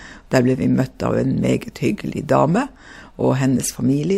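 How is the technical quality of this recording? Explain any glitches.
No glitches turn up anywhere in this speech recording. There is nothing in it that calls for a technical explanation.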